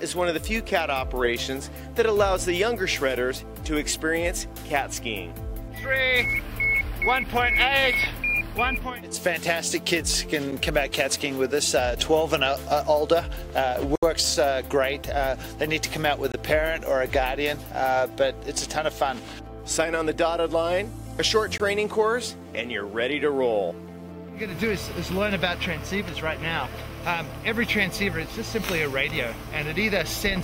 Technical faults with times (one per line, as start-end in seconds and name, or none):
13.96-14.03 block of digital silence
16.32-16.34 block of digital silence
21.58 block of digital silence